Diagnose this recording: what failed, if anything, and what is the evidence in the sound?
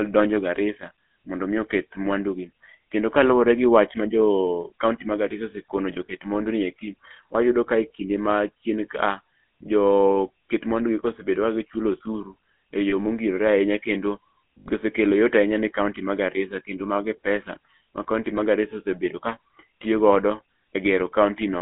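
The codec stage failed. GSM full-rate coding is heard throughout: gravelly, buzzy speech confined to about 200 Hz to 3.4 kHz, consistent with 13 kbps full rate.

There are lost GSM frames on the network path at 6.06–6.09 s, 12.90–12.93 s and 14.58–14.67 s. The decoder repeats stale parameters, producing a brief metallic ring. The last one lasts about 80 ms, which fits four lost frames.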